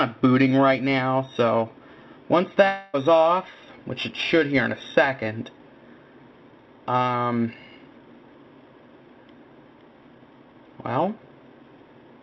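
Periodic clock jitter runs through the whole clip. Interference at a single rate, around 2 kHz, is wobbling the converter's sampling clock, so every component of the sound picks up sidebands spaced about that far above and below it. The higher components are hit hardest, which gives a rough, metallic edge that rides on the audio and disappears whenever the signal drops to silence. The call path's cut at 4 kHz, which fits a G.711 mu-law link, leaves that roughness in the band that remains.

From 2.68 s to 2.96 s there is a gap that is likely a long network dropout. Roughly a quarter of a second of audio, about 260 ms, is simply gone. For almost all of that span the receiver carries the last sound forward as a buzz or hiss that thins out as it goes, and at no point does it fall fully silent. When the sound resumes it has skipped ahead past the lost section instead of picking up where it broke off.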